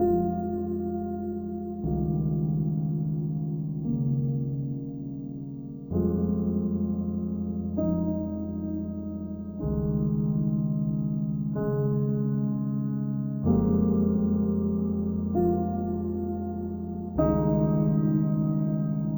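Stereo read as mono runs throughout the clip, from the first moment to the last. The left and right samples, which alternate in the stored data, have been played back one after another as a single channel, so every pair of samples takes twice as long to pass. The sound crawls at half speed and sits a full octave, 12 semitones, below where it belongs, with a fainter mirrored copy in the upper half of the spectrum.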